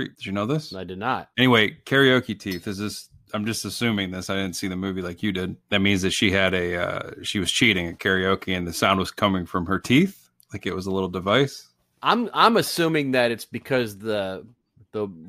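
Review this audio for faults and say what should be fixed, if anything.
Nothing in the audio needs to be fixed, since no faults turn up anywhere in it.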